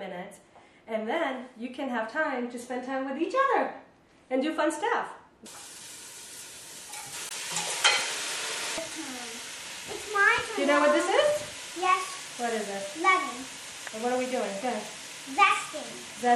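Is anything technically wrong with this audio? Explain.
Yes. Two problems are audible.

Throughout the clip there is plainly audible codec damage that likely comes from MP3 compression, at a level consistent with a low bitrate of around 64 kbps. The encoder has too few bits for the spectrum, so it zeroes weaker frequency lines, and they switch on and off between frames. The result is a watery, swirling texture with metallic chirps on bright, noisy content, blurred attacks and treble that stops at a fixed cutoff.

From 7.28 to 7.33 s there is damaged data in a compressed stream. Some of the encoded frames at that point are corrupt, so the decoder misreads or discards them, loses sync and looks for the next valid frame header. That produces a brief disruption of about 50 ms that breaks the flow of the sound and may be heard as a chirp, squawk, click or short hole.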